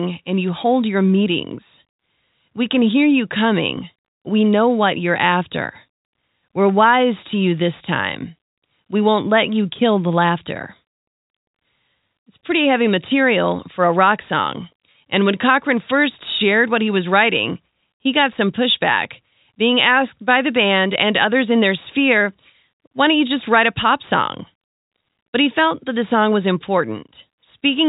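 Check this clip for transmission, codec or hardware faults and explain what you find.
One transmission fault stands out, a brief packet loss with pitch repetition. It falls from 14.92 to 14.94 s, just after "rock song". About 20 ms of audio went missing, which fits a single lost packet. The receiver filled the hole by repeating the last pitch period of the speech, so nothing drops out. The gap is too short for any fade to silence. It comes across as a tiny held, slightly buzzy blip before the talker carries on. The telephone band of the G.711 coding is audible throughout, with nothing above 4 kHz.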